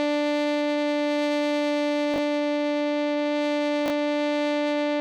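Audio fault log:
2.14–2.18 s and 3.86–3.90 s, chunks out of order: brief jumbled moments. Two 20 ms chunks are swapped, so the music plays out of sequence across three hard joins.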